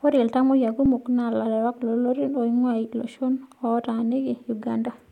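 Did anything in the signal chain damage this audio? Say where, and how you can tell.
Yes. There is an underrun with held sample at the driver or buffer stage, at 0.86 s in the speech. For about 2.7 ms the output buffer ran dry, and the converter held its last value, which fits a 128-sample buffer. On a waveform this shows as a short flat line. On a spectrogram it is a thin vertical seam. Because playback resumed where it stopped and little or no audio was lost, the join is soft rather than a sharp click.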